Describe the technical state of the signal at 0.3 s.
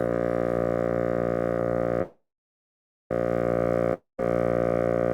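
At 0.3 s the music plays through cleanly, with no audible dropout, click, distortion or other fault at that point.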